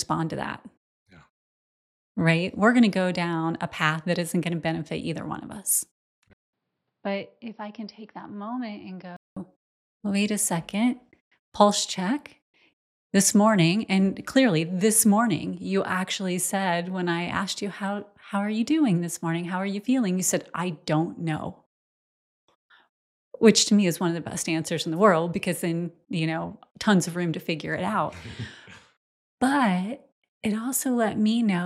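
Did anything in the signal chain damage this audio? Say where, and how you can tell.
Yes. From 6.33 to 9.37 s the sound turns dull and boxy, with nothing above 5.7 kHz. A 200 ms gap precedes it. Level falls about 10 dB, with new faint noise underneath. The driver likely switched the input to a poorer device.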